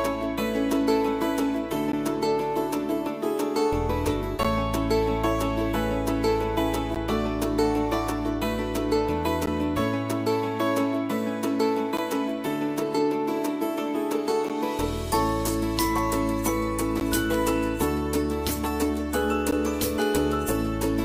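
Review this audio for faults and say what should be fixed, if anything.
Short hard-edged dropouts of about 13 ms occur every 2.5 s, at 1.92, 4.43, 6.95, 9.46, 11.97, 14.49, 17.00 and 19.51 s. This is a gap between chunks, with silence inserted where 2.5 s blocks join. To prevent it, strip codec padding and schedule each chunk to start exactly where the previous one ends.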